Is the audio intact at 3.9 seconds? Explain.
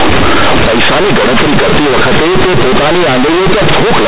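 No. Throughout the clip, including at 3.9 s, mu-law companded bytes are read as linear 8-bit samples without expansion, giving loud, buzzy distortion and heavy noise in pauses.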